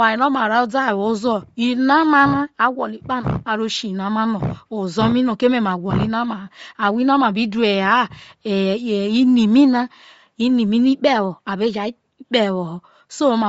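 Throughout the speech, likely Bluetooth LC3 compression, which fits 32 kbps, cuts everything above 7.7 kHz and leaves plainly audible coding damage.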